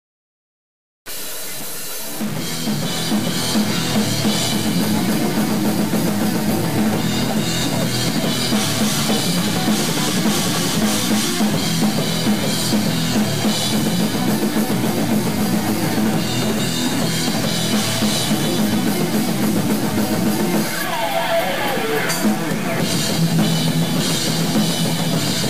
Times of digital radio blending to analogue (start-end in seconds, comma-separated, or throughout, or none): none